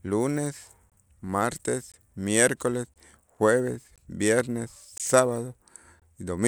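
Speech streamed in one-second chunks suffers a gap between chunks, leaving 20 ms silences at 0.90, 1.92, 2.94, 3.96, 4.98 and 6.00 s that rhythmically puncture the sound.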